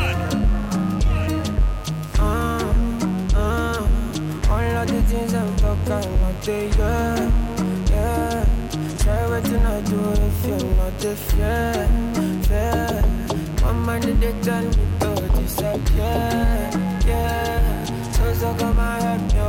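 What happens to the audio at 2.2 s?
At 2.2 s, as throughout the clip, a mains buzz sits fairly prominently under the sound: switching spikes at 50 Hz spray harmonics into the kilohertz range, giving a raspy edge rather than a smooth, low hum.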